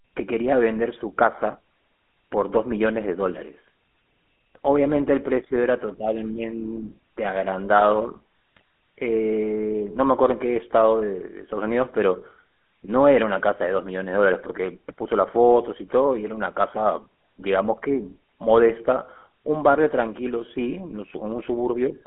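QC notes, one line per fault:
Throughout, GSM full-rate codec: the speech has a buzzy, gravelly roughness and a narrow, boxed-in sound with nothing above roughly 3.4 kHz. The codec models the vocal tract and excites it with sparse regular pulses, which fits a 13 kbps GSM full-rate path on a telephone-band line.
8.57 to 8.61 s, GSM bit errors: a brief squawk and gargle lasting about 46 ms breaks into the speech. Corrupted bits reached the decoder and scrambled its filter, pitch or gain values, which fits a few hit frames, bending the spectrum and jolting the level for that instant.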